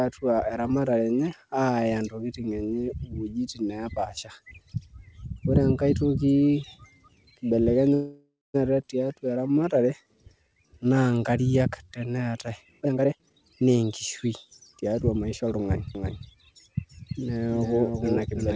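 Call audio freeze, 7.94 to 8.56 s: the speech stops and the last sound is carried on as a fading buzz for about 0.6 s, the final 0.22 s of it silent. The likely cause is packets held up in transit, so the jitter buffer ran dry and the receiver improvised until they arrived. The speech then resumes exactly where it left off. Nothing is lost, but the stream now runs about 0.6 s later than before.

Skip ahead, 8.82 to 8.85 s: playback jumps forward with almost no gap, and about a third of a second of speech is missing. The two sides are butted together in under 10 ms. Audio that was already queued behind the dropped stretch went straight out, which removes roughly half the delay the freeze had built up. It is heard as an abrupt splice.

Jitter buffer slow-down, 9.07 to 11.99 s: the speech plays at about 89% speed with its pitch unchanged. The receiver repeated single pitch periods and slivers of pauses over and over to rebuild its reserve, adding 334 ms in total. 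Vowels and gaps sound stretched and drawling, and the repeated cycles can give a faint warble.

Jitter buffer speed-up, 12.81 to 13.84 s and 14.24 to 15.61 s: the buffer held more than its target, so the receiver cut short pieces of one or a few pitch periods in quick succession, keeping the pitch. The first stretch runs at 150% and loses about half a second, sounding clearly rushed and clipped. The second runs at 106% and loses about 0.1 s, a milder hurry.

Doubled audio track, 15.95 s to the end: a second full-band copy of the speech enters abruptly, about 300 ms behind the original and about 5 dB quieter. It has no decay or room colour, which separates it from reverb. The likely cause is the same audio being captured again through a slower path and mixed back in. The result is a distinct, clean slapback echo on every syllable. Throughout, nothing is heard above 8 kHz, consistent with a wideband call codec.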